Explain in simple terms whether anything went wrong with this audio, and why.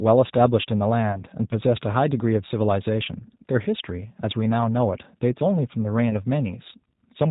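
Two things went wrong. The whole clip runs through the G.729 codec, a low-rate telephone codec that rebuilds speech from a model of the vocal tract and a few pulses per short frame rather than sending the actual waveform. Everything above 4 kHz is cut, so the speech sounds muffled and narrow, and the codec's modelling adds a plainly audible rough, slightly synthetic edge throughout.

There is also VoIP packet loss concealed by the speech codec, at 1.12 to 1.18 s and again at 6.10 to 6.22 s. Each time, a 20 ms gap went missing, which fits a single dropped packet. The decoder filled the hole by repeating its last pitch and vocal-tract settings at falling strength, which produces a brief stretched sound that fades. Because each frame builds on the one before, the sound stays weak or distorted a little past the gap itself.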